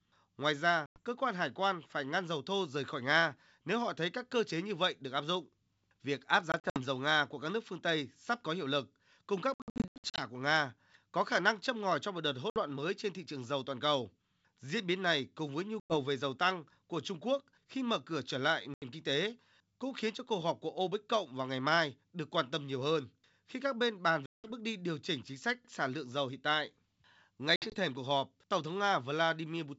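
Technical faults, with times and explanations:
0.86–1.0 s (before "cơ quan hải quan"), 6.52–6.8, 9.54–10.22, 12.5–12.59 (between "ngòi cho một đợt" and "mới trên thị trường"), 15.8–15.97, 18.74–18.85, 24.26–24.5 (between "khi các bên bàn" and "bước đi điều chỉnh"), 27.56–27.77 s: packet loss on an ADPCM call. Hard-edged silent holes of up to 180 ms, fitting lost 20 ms packets. At 6.52, 9.54 and 27.56 s the gaps are scattered, with runs up to 80 ms. Unlike concealed loss, speech returns slightly distorted while the G.722 decoder's predictor and step size resynchronise.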